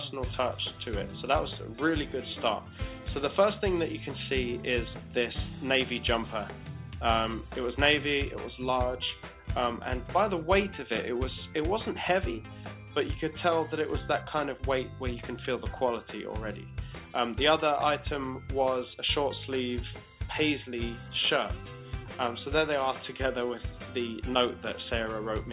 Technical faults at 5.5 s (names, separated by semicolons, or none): none